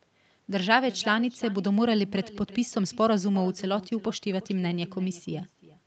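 Throughout, echo with no canceller: the far end's loudspeaker feeds its microphone, so each phrase returns roughly 400 ms later as a thin copy, about 19 dB down.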